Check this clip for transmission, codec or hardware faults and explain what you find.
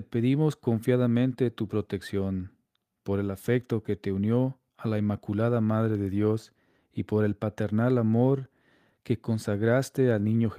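Nothing in the speech points to a transmission, codec or hardware fault: the signal holds steady and continuous, with no audible disturbance anywhere along it.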